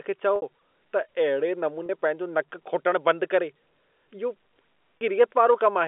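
At 0.36 to 0.42 s, right after "खे चओ", then at 1.86 to 1.89 s and 4.98 to 5.01 s, the speech hits packet loss with pitch repetition. The receiver covers each gap by looping the last pitch period. The first gap, about 60 ms and consistent with two lost packets, gives a held, buzzy tone that fades. The 30 ms gaps sound like a slightly held, buzzy note. Unlike a plain dropout, the gaps are bridged with repeated sound, and unlike a stutter no syllable is repeated. This all sits within the 250 Hz to 3.5 kHz G.711 telephone band.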